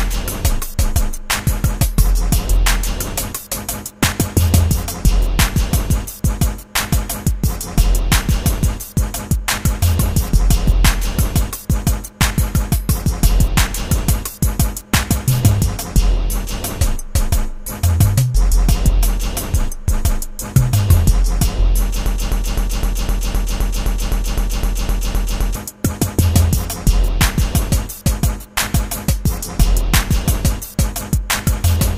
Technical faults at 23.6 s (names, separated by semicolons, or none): broken-record loop